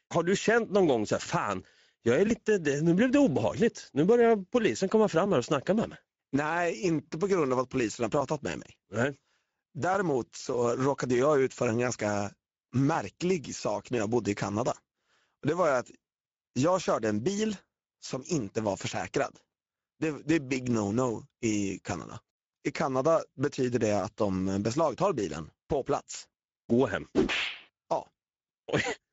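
Throughout the speech, Speex codec damage is plainly audible: a hoarse, noisy grain from the sparse excitation, fitting roughly a 16.8 kbps Speex setting, rather than the swirly, watery smearing of transform codecs.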